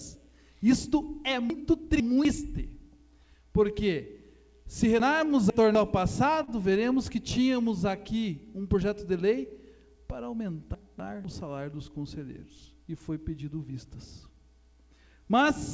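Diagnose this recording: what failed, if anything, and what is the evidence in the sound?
Two faults are present, both in the delivery of the audio, not in the capture. The band stops at 8 kHz, consistent with the G.722 wideband call codec.

Chunks out of order, at the buffering or network stage, appear three times: 1.5 to 2.25 s, 5.0 to 5.75 s, and 10.75 to 11.25 s. Each region is a jumbled stretch. The audio runs in 250 ms blocks, and one block plays late, two block-lengths late in the first two cases and one late in the third. The content is complete but out of sequence, with hard joins at every displaced boundary.

Short concealed packet loss, in the network and jitter-buffer stage, occurs once, at 6.44 to 6.50 s. About 40 ms of audio never arrived in time. The receiver filled roughly 36 ms by extending the preceding sound, then blended back into the incoming stream. This is heard as a brief smear or wobble.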